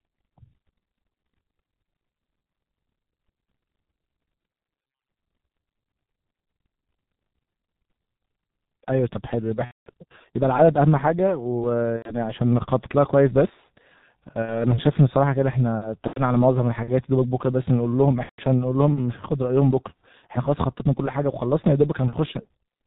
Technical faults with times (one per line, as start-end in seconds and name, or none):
0.00-22.87 G.723.1 codec
9.65-9.89 VoIP packet loss concealed by the speech codec
11.96-12.17 VoIP packet loss concealed by the speech codec
14.42-14.67 VoIP packet loss concealed by the speech codec
16.07-16.21 VoIP packet loss concealed by the speech codec
18.23-18.43 VoIP packet loss concealed by the speech codec